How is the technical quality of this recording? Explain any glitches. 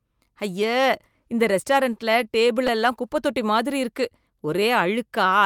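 The recording has one glitch. Between 1.93 and 2.70 s, just before "எல்லாம் குப்பைத் தொட்டி", there are scattered short gaps: about four lost or late packets, each roughly 10 ms, patched by extending the preceding sound. Around 40 ms in total is concealed, heard as brief ticks and slight smearing in the speech.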